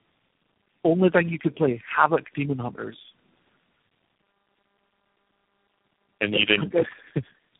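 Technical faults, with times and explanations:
Throughout: tandem speech coding, speech rough, muffled and warbly, nothing above 3.8 kHz; four speech codecs in a row, each recoding the previous one's degraded output.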